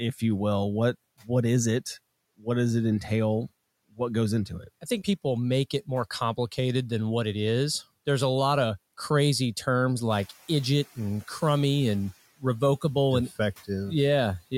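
Speech cut by the noise suppressor at 4.49 to 4.85 s, just before "think people make it": the suppressor treats quiet speech as noise, dipping it about 8 dB for roughly a tenth of a second.

Noise suppressor catching up from 10.1 to 10.31 s, between "lot of crazy terms" and "idiot and crummy and": room noise jumps about 11 dB, leaks through briefly, then sinks about 8 dB over 210 ms.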